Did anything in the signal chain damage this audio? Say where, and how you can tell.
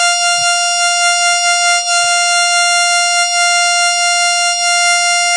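Yes, at the codec stage, throughout the music. The top end stops dead at about 10.3 kHz, and the sound is heavily smeared, with a washy, ringing quality and hiss that swells and fades with the music. The likely cause is WMA compression at a starved bitrate, which fits around 24 kbps. The transform encoder spends too few bits, so quantisation noise smears across each long block, weak components are zeroed, and everything above the cutoff is discarded. On a spectrogram, this appears as a hard ceiling near 10.3 kHz with patchy holes below it.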